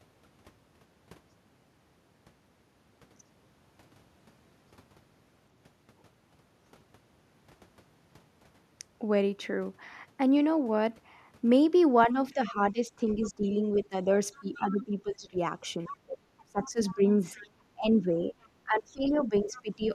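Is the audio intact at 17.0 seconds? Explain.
No. At 17.0 s the clip is inside a stretch of speech suppressed in double talk, running from 12.12 to 19.93 s. The voice dips, loses its high end or drops out in pieces, about 4 s of it in total, at worst by about 20 dB. This is likely an echo canceller that, with both sides talking at once, could not tell the near talker from loudspeaker echo and turned both down.

The same moment also has the other side's voice leaking through, from 16.64 to 17.47 s. A faint second voice, about 25 dB below the main speech, sits under the talker. This likely comes from the far side playing on the talker's loudspeaker and reaching the microphone, where the echo canceller left a residue.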